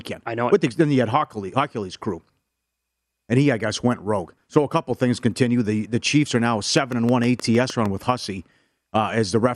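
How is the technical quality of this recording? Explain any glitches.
The recording has one clear glitch, a train of clicks late in the clip.

From 6.77 to 7.87 s, a regular series of about seven clicks arrives at roughly 6.5 per second, peaking around 5 dB above the speech. The likely cause is interference from nearby equipment or a faulty connection or power supply injecting repeated pulses. It sounds like an even ticking laid over the speech. On a spectrogram it shows as evenly spaced thin vertical broadband lines, and on the waveform as matching sharp spikes standing out above the speech.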